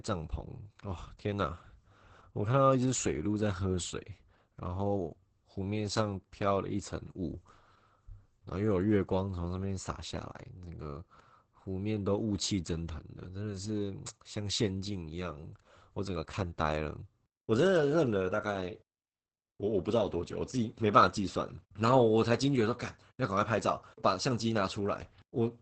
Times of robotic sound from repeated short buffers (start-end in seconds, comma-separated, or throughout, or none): none